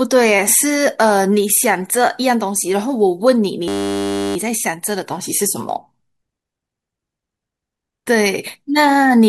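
A speech clip with a system hang loop from 3.68 to 4.36 s. A 10 ms slice of audio repeats exactly, dozens of times. This produces a steady buzz at 100 Hz. The system stalled while the audio hardware kept replaying a buffer of about 10 ms.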